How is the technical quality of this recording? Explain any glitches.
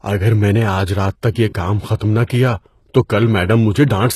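The recording has plainly audible low-bitrate coding damage throughout, plus one short pre-echo.

HE-AAC compression, throughout: nothing reaches above about 12.3 kHz, and the upper band sounds synthetic. This is likely HE-AAC at a very low bitrate, around 16 kbps, rebuilding treble by copying lower bands upward. Because the copied harmonics don't line up with the real ones, sibilants come out gritty, metallic and lispy.

Pre-echo, 1.96 to 2.00 s: a short hiss runs for about 44 ms before a sharp attack. The codec spreads quantisation noise across its whole transform block, so the noise sized for the loud onset leaks into the quiet moment before it, leaving that attack softened and smeared.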